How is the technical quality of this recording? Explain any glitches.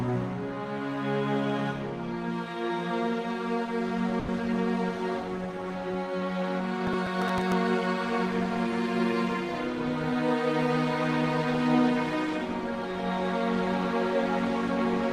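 Two brief glitches disturb the audio.

At 4.19 s to 4.30 s there is a short stall from a late packet. A packet arrived late and the jitter buffer ran dry. The receiver held the last sound for about 90 ms, then resumed. Nothing is lost. The sound just hangs and runs 90 ms later afterward.

From 6.87 s to 7.52 s comes processor overload crackle. The processor fell behind and missed around ten buffer deadlines. That fits buffers of about 5 ms. Each miss replayed a scrap of old audio with hard edges. The result is a gritty crackle over the sound.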